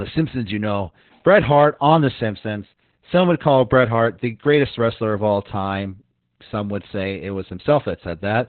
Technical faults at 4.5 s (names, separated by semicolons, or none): Opus voice compression